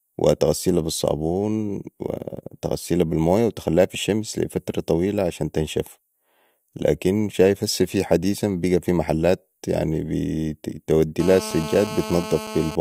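From 11.20 to 12.76 s, GSM phone buzz: a nearby handset's 217 Hz transmit bursts are rectified by the audio circuit, producing a steady, raspy buzz about 11 dB below the speech.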